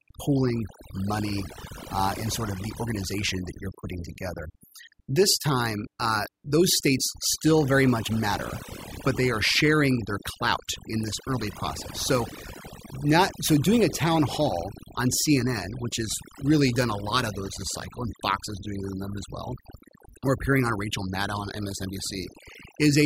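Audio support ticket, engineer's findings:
Noise-reduction artefacts throughout; background reduced, breaking up into twinkling specks between phrases. Overdone noise removal: denoiser set too aggressive, cutting individual frequency bands near its noise estimate, taking low-level speech detail along with the noise floor.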